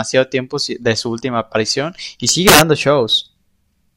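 From 2.29 to 2.61 s the speech hits integer overflow: peaks driven about 5 dB past full scale wrap to the opposite sign instead of limiting, giving violent cracks. The waveform shows peaks snapping rail to rail, and the spectrogram shows broadband vertical streaks.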